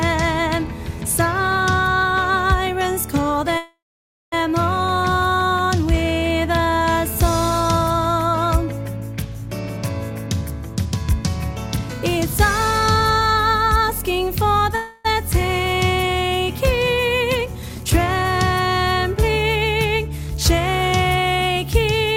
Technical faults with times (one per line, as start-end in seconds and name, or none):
3.57-4.34 call audio freeze
9.77-11.30 jitter buffer speed-up
14.76-15.07 call audio freeze
17.46-19.98 jitter buffer speed-up
20.81-22.07 jitter buffer speed-up